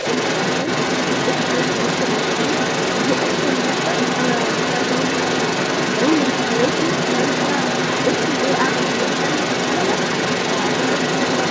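From start to finish, a second voice runs under the speech, somewhat louder than the talker, likely the other side's voice leaking through an incomplete echo canceller; spectrograms show overlapping harmonic stacks throughout.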